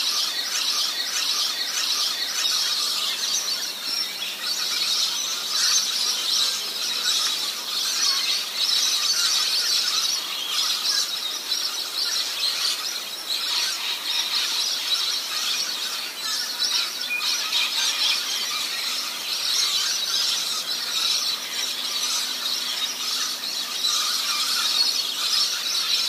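From the start to 2.44 s, a broken-record loop repeats one 0.61 s fragment back to back, likely a stalled player. The audio meant for that span is lost.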